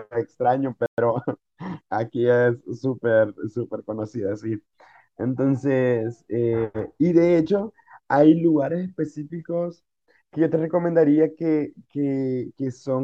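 A playback stall at 0.86 s likely came from the player running out of buffered data or having its output thread held up. The speech cuts off mid-flow and the output sits silent for 120 ms. It ends at 0.98 s. The listener hears a short, abrupt hole rather than a fade. The speech then resumes as if nothing had happened, only later.

Time-compressed catch-up runs from 0.98 to 1.78 s. Having fallen behind, the player works off its backlog by cutting out tiny slices and cross-fading across the joins. The speech runs about 1.15 times faster for those 0.8 s, but the pitch stays where it was. The splicing leaves a hurried rhythm.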